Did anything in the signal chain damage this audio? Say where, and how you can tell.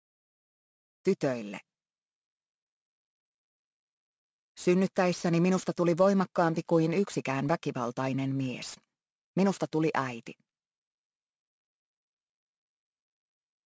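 Yes. Aliasing from sample-rate conversion runs throughout: highs turn gritty and metallic, with inharmonic tones folding back under a hard 8 kHz edge, about 25 dB below the signal, which fits a resample to 16 kHz without filtering. A clean band-limit would simply sound dull.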